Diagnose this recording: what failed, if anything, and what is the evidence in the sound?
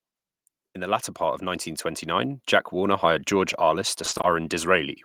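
Automatic gain rising in the call-processing stage: from 0.73 s to 3.32 s the speech and the background noise floor swell together by about 7 dB. The AGC judged the input too quiet and ramped its gain slowly. On a waveform the envelope climbs steadily, and a spectrogram brightens across all bands at once.

Repeated packet loss (robotic sound) at the network stage, from 4.05 s to 4.25 s: the speech turns choppy as short holes, the longest about 20 ms, keep recurring. About half of those 200 ms is concealment repeating the last sound, visible as smeared, repeated spectral slices between brief dropouts.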